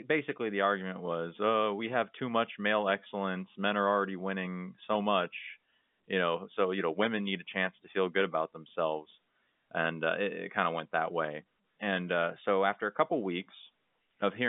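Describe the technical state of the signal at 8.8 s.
At 8.8 s the signal is intact, with the speech carried cleanly through its telephone-band G.711 coding.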